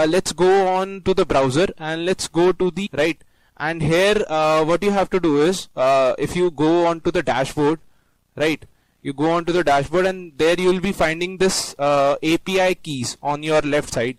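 No technical faults can be heard anywhere in this audio. There is no moment that calls for a timestamp or a fix.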